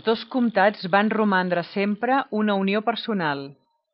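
The speech recording carries no audible technical faults: the signal holds steady throughout, with nothing breaking into or disturbing it at any point.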